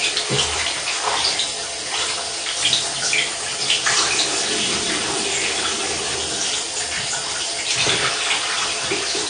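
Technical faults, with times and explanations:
Throughout: AAC compression. Nothing reaches above 9.6 kHz, and sustained sounds carry a warbling, fizzy smear with gaps in the spectrum. That points to likely AAC-LC coding at a low bitrate, around 32 kbps. A plain low-pass filter would dull the sound without this swirl.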